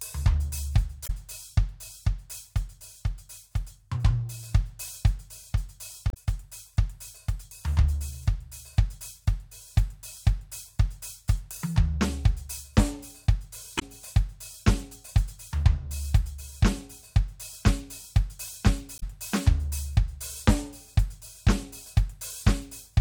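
Four brief glitches break up the music at 1.03–1.10 s, 6.10–6.17 s, 13.76–13.83 s and 18.95–19.03 s, each about 70–80 ms long. This is damaged data in a compressed stream: corrupted bytes make the decoder misread frames and lose sync until it locks onto the next valid frame.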